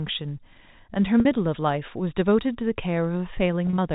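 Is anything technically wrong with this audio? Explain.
Yes, there's packet loss with pitch repetition, twice. At 1.20 to 1.25 s about 50 ms drops out. At 3.67 to 3.78 s about 60 ms goes in short bursts, none longer than 30 ms. Each time the receiver loops the last pitch cycle to cover the hole, so you hear a brief, slightly buzzy held tone. All this sits on narrowband G.711 telephone audio.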